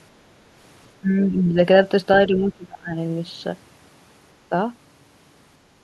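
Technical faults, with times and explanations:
1.01 to 1.56 s, speech suppressed in double talk: the talker's level sags by roughly 10 dB for about half a second, likely because the echo canceller could not separate the talker from the loudspeaker echo of simultaneous far-end speech and turned everything down.
2.28 to 2.97 s, speech suppressed in double talk: a deeper dip of around 20 dB over about 0.7 s, likely the same canceller confusion clamping harder.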